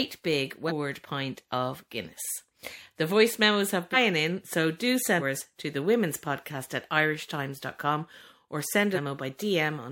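The speech jumps forward four times where compressed frames were skipped. At 0.68 s it leaps ahead just before "pint of". At 3.93 s it jumps between "voice memos have" and "in so do". At 5.18 s it jumps again before "to the women's podcast". The last skip, at 8.94 s, is longer. Whole frames never reached the output. Each skip removes about 0.4 s of speech, the last about 0.7 s, which fits a run of 46.4 ms frames.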